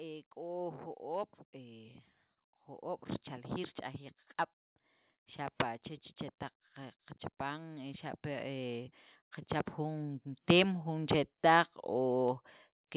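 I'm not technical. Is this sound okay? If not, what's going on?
No. There are two kinds of problem.

The first is automatic gain rising. The call's volume control decided the speech was too quiet and turned it up slowly. From 0.34 to 2.01 seconds the voice and the background grow louder together. It happens again, more strongly and for longer, from 6.75 to 11.14 seconds. It sounds like someone slowly raising the volume knob mid-sentence.

The second is a short concealed packet loss. From 2.34 to 2.38 seconds, a tiny piece of sound, about a fiftieth of a second, never arrived in time. The receiving end covered the gap by stretching the sound just before it, then blended back in. You may hear a brief smear or wobble just before "jo'oob' richaljiil".

Throughout, the sound is a little muffled because the phone-style connection carries nothing above 4 kHz.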